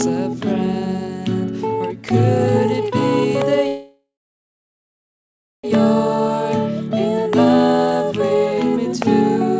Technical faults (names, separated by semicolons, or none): call audio freeze